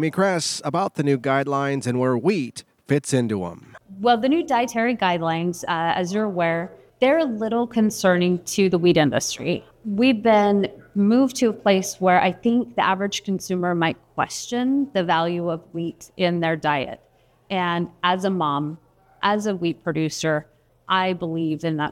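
Nothing technically wrong can be heard anywhere in the audio. No fault needs a time or a cause.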